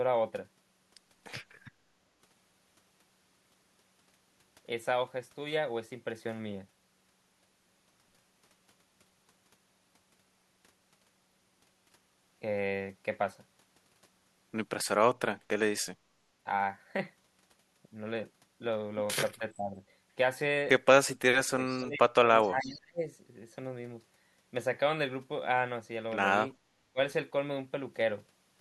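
Speech recording with two kinds of call-processing fault clustered in its last ten seconds. Speech suppressed in double talk hits three spots: 19.39 to 19.82 s, where the level dips by about 15 dB over roughly a third of a second; 21.4 to 23.0 s, the worst, with gaps reaching about 30 dB down across most of that stretch; and a brief hole at 26.92 s, about 25 dB deep. On a waveform these look like the envelope being squeezed or notched. On a spectrogram they appear as sudden fades or vertical gaps where the harmonics and high-frequency energy vanish. The likely cause is an echo canceller that, with both sides talking at once, could not tell the near talker from loudspeaker echo and turned everything down. Echo leak sits inside the worst dip, at 21.7 to 21.83 s and 22.43 to 22.73 s. A faint copy of the voice returns 416 ms late, about 25 and 30 dB below the main speech. On a spectrogram it shows as weak harmonic traces offset in time from the originals. 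It is likely residual echo from a speakerphone whose canceller did not fully remove what its microphone picked up.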